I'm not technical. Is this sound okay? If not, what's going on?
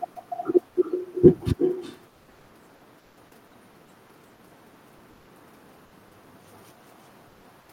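No. Throughout, there is echo with no canceller: every phrase returns as a fainter, thinner copy just under half a second later, because the far end's loudspeaker feeds its microphone and nothing removes that sound before it travels back.

There are two brief patches of comfort noise in place of the background, from 2.99 to 3.17 s and from 7.60 to 7.68 s. The real room sound gives way to a slightly quieter, flat hiss, likely from the sender pausing transmission during silence.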